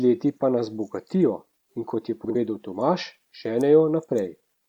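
At 2.24 to 2.36 s the speech has frames out of order: two adjacent blocks of about 52 ms were decoded in swapped sequence, so that stretch plays its halves reversed. It comes across as a brief garbled flutter. No time is lost.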